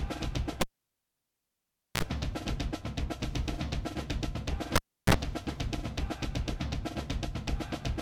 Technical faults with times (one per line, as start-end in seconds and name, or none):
0.61-2.03 cable pulled and plugged in
4.75-5.14 cable pulled and plugged in